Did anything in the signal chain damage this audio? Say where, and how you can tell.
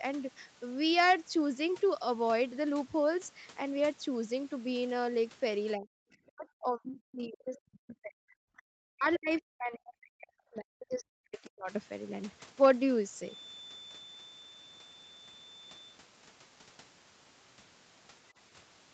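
Yes. Speech suppressed in double talk, 5.75 to 8.73 s and again 8.89 to 11.72 s: the speech drops by as much as about 40 dB in each stretch. This is call processing, most likely an echo canceller that couldn't separate talker from loudspeaker echo and turned both down.

The other side's voice leaking through, 9.14 to 9.19 s: a brief scrap of a second voice surfaces, about 15 dB below the main speech. The likely cause is residual echo that the canceller failed to subtract from the microphone signal.

Feedback whistle, 13.19 to 16.02 s: a thin, steady 3.5 kHz tone sits about 20 dB below the speech, swelling and fading slowly in level. The likely cause is a loudspeaker-to-microphone loop at the edge of feedback, sustaining one frequency without running away.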